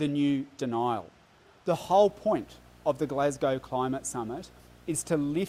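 From 1.83 s to the end, a video or display buzz appears: a screen or video cable couples into the audio path, giving a 60 Hz buzz at the picture's field rate, around 30 dB below the signal, with hash above it rather than the smoother tone of mains hum.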